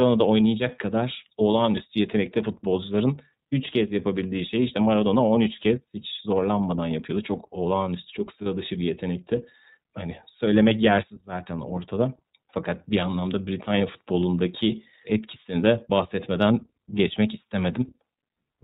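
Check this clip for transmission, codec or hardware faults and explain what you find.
The clip has two faults: iLBC codec coding throughout and one lost iLBC frame just after 8.4 s.

iLBC codec: From start to finish the speech passes through a narrowband VoIP coder that codes each frame's excitation independently of the previous frame. The damage is plainly audible. Everything above 4 kHz is gone, which makes the voice muffled and telephone-like, with a rough, slightly synthetic grain. That character fits iLBC's 30 ms frame mode at around 13.33 kbps.

Lost iLBC frames: From 8.42 to 8.46 s, roughly 30 ms of coded audio never reached the decoder. To fill the gap, the decoder repeated the last pitch cycle and mixed noise into it. The result is a brief held, faintly buzzy vowel in place of the real sound. Because iLBC frames are coded independently, the decoder recovers on the very next frame, and the voice returns cleanly right after the gap.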